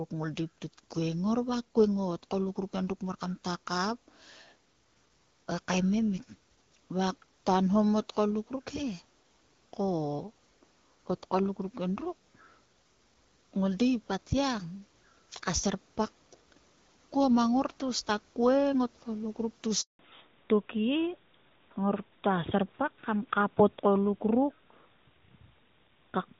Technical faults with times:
19.81-19.99 handover gap
19.99-26.40 fallback to narrowband

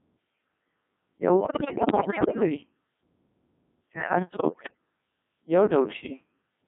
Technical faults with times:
0.00-6.68 Codec 2 vocoder
1.40-2.43 bit errors on digital voice radio
4.32-4.77 bit errors on digital voice radio

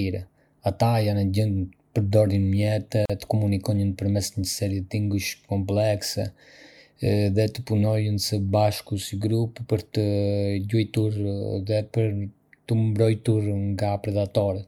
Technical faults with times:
3.05-3.10 gap at a join of encoded pieces

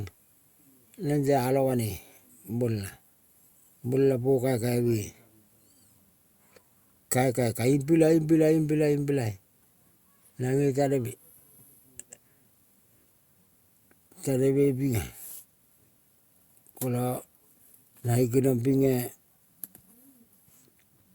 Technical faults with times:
none

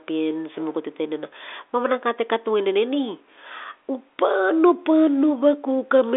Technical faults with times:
none

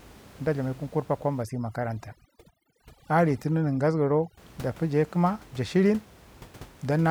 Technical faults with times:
1.42-4.37 overdone noise removal

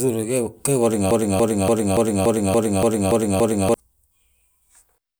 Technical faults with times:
1.11-3.74 broken-record loop

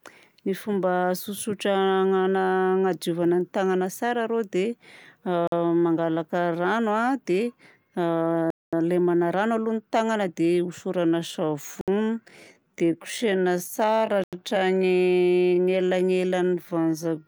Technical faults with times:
5.47-5.52 Bluetooth stall
8.50-8.73 Bluetooth stall
11.07-17.27 time-stretched section
11.81-11.88 Bluetooth stall
14.24-14.33 Bluetooth stall

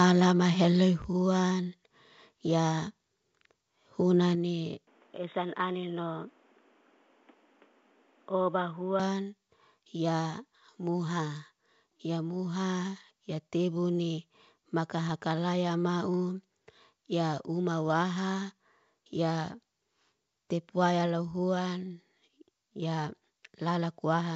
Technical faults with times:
1.02 microphone volume stepped down
4.35 microphone volume stepped down
4.87-9.00 input switched to a poorer device
15.09 bit errors on an ADPCM link

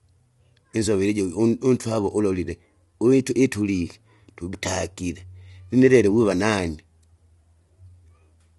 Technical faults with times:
0.00-8.59 low-delay AAC compression

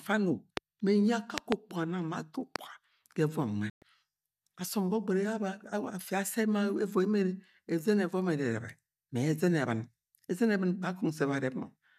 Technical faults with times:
0.57-0.59 loud pop
1.38-1.54 loud pop
2.56-2.58 loud pop
3.70-3.83 digital broadcast dropout

